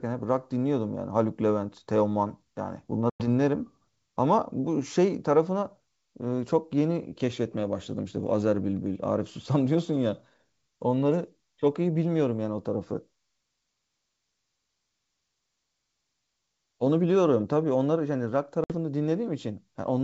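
Packet loss on an ADPCM call hits this speech recording twice. Lost packets were filled with silence, and the receiving decoder's adaptive predictor and step size drifted away from the sender's. At 3.10 to 3.28 s a hard-edged gap of about 100 ms, which points to a handful of dropped packets, is followed by slightly distorted speech. A shorter 60 ms hole at 18.64 to 18.74 s does the same on a smaller scale, over the clear G.722 wideband telephone coding at 64 kbit/s.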